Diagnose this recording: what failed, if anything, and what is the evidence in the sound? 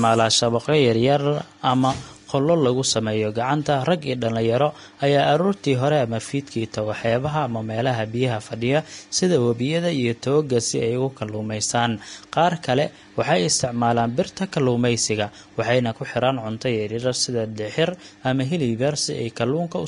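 Vorbis compression, throughout the speech, is the likely fault, at the codec stage. Nothing is left above 10.6 kHz, so the top octave ends at a hard ceiling. Below that cut-off the treble is plainly grainy and hissy, and consonant onsets are smeared. At this bitrate the encoder spends too few bits on the upper bands: it keeps a smooth spectral envelope but replaces fine high-frequency detail with noise of similar energy. The damage points to roughly 36 kbps.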